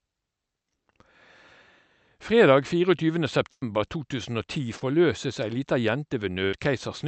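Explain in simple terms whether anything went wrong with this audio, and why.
Two things went wrong, both from audio going missing on its way across the call. Around 3.51 to 3.63 s and again at 6.45 to 6.54 s there's a burst of packet loss. Roughly a tenth of a second, then about 80 ms, never arrived, so the receiver stretched out the last sound and faded it before jumping ahead. At 4.79 s there's a short concealed packet loss, a brief smear where about 20 ms was patched over by guessing from the sound just before it.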